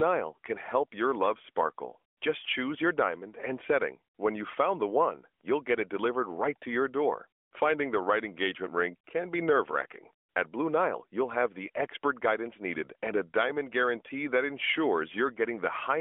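No technical faults can be heard anywhere in this recording.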